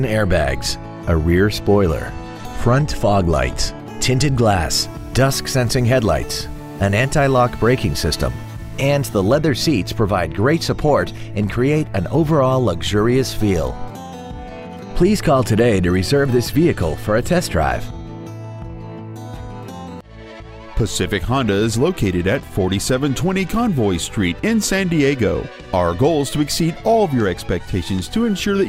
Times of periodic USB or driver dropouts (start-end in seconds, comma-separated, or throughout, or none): none